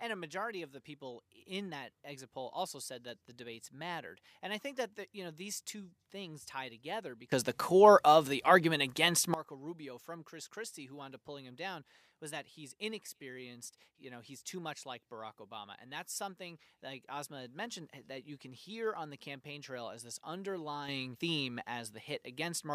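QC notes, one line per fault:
7.32–9.34 s, sudden gain jump: right after "two things tie together", the speech and background noise leap together by about 18 dB, then fall back, likely from a gain change applied sample-to-sample without a ramp.
20.88 s to end, sudden gain jump: speech and noise floor rise together by about 6 dB and stay raised, likely the same kind of unramped gain step.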